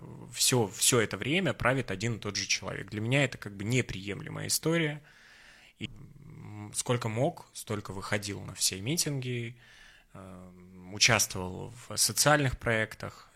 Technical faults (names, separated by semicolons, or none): stream segment skipped